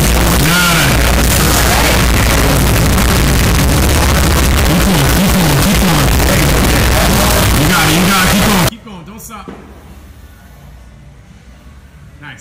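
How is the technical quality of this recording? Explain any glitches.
The quality is poor for the first stretch: from the start to about 8.69 s there's a float read as integer fault. The likely cause is 32-bit float samples being read as 32-bit integers, so the sign and exponent bits end up setting the level. The waveform turns almost square at an almost fixed, high level, so it's very loud and harsh, with the background noise as loud as the main sound. The pitch can still be followed through it.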